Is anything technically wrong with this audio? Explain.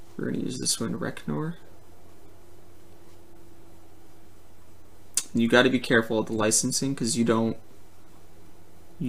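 No, nothing technically wrong can be heard here; the signal stays steady and intact across the whole clip.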